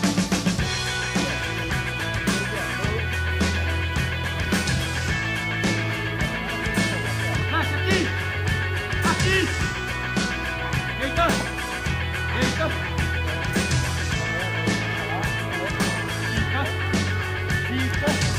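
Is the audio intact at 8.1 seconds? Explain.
Yes, the audio is intact at 8.1 seconds, with no dropout, click, distortion or other fault at that moment.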